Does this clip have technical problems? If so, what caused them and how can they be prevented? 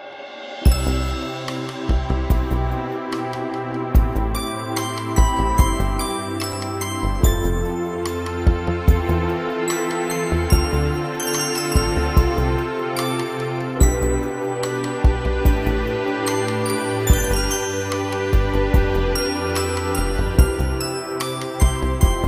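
Yes. At about 6.53 s there is a short tick where the audio drops out for about 5 ms. This is a block of digital silence: a run of samples replaced by zeros, so the waveform jumps straight to nothing and back again with no fade. At this length the hole is too brief to hear as a gap. The likely cause is a playback or processing program that failed to fill its output buffer in time. Prevention means giving the audio thread higher scheduling priority, enlarging the buffer, and guarding calculations against invalid values.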